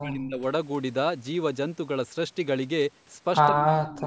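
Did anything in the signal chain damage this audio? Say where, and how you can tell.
Yes, in the call processing. Speech dips from 0 to 0.44 s and from 3.5 to 4.06 s, by up to about 35 dB. This is likely speech suppressed in double talk.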